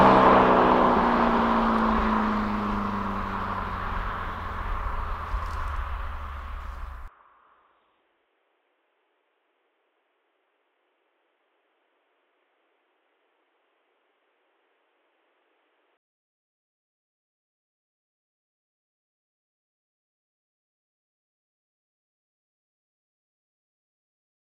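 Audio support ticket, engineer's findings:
Input switched to a poorer device, 7.08–15.97 s: abrupt dulling, nothing above 3.8 kHz, about 10 dB quieter, faint new noise floor, no gap; likely input-route change.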